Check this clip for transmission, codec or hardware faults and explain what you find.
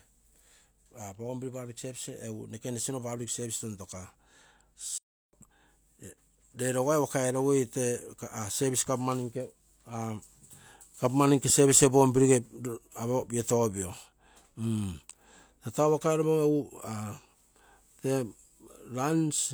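One fault is audible, a playback stall in the speech.

From 4.98 s to 5.33 s, about 351 ms, the output falls silent in mid-flow and then carries on. The likely cause is the player running short of buffered data or its audio thread being blocked, so nothing was delivered to the output until it recovered. Unlike a packet-loss dropout, the gap is a single continuous silence lasting a third of a second, not a brief masked glitch or a warbled concealment patch.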